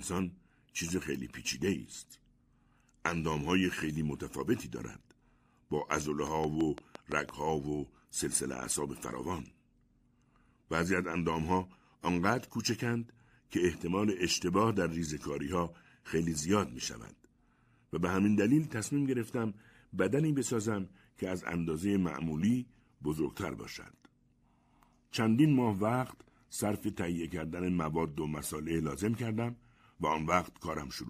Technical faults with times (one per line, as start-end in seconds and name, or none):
6.27-7.30 train of clicks